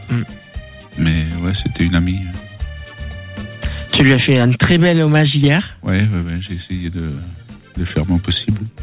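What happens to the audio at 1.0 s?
Nothing goes wrong at 1.0 s: the audio runs on intact through the WebRTC call path, with its G.711 A-law coding leaving nothing above 4 kHz.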